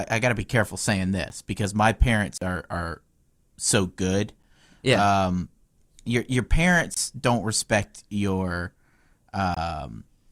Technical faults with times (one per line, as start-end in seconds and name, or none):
1.29 block of digital silence
2.38-2.41 block of digital silence
4.43 block of digital silence
6.94-6.97 block of digital silence
9.54-9.57 block of digital silence